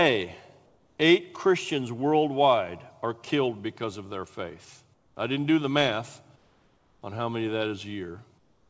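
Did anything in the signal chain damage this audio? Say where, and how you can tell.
Yes. In four pauses the room background gives way to a smoother, quieter hiss, about 2 to 5 dB down: at 0.66–0.98 s, at 4.94–5.16 s between "because of their faith" and "I didn't do the", at 6.36–7.02 s between "didn't do the math" and "on how many that", and from 8.38 s to the end. This is comfort noise in place of the background, likely from discontinuous transmission in the call processing stage. The sender stops transmitting when no speech is detected, and the receiver fills the gap with synthetic noise matched only roughly to a background sitting about 40 to 43 dB below the speech, so tone and level shift. The call codec path, which carries nothing above 8 kHz consistent with G.722, is not the cause.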